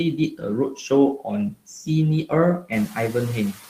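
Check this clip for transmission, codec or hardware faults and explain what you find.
Two related faults from a noise suppressor are audible in this speech clip: processing artefacts throughout, and two brief passages where the speech itself is pulled down.

Noise suppressor artifacts run through the whole clip. The background dips between phrases and swells back under the speech. The suppressor is trimming bands it judges to be steady noise by about 7 dB, frame by frame, so the floor keeps shifting.

Speech cut by the noise suppressor occurs from 0.17 to 0.44 s and again from 2.6 to 2.72 s. In each, roughly a tenth of a second of speech sounds swallowed and faint, dropping by about 14 dB and about 13 dB. The suppressor mistook these quieter speech components for noise. The second cut comes just after the room noise rises by about 12 dB at around 2.5 s.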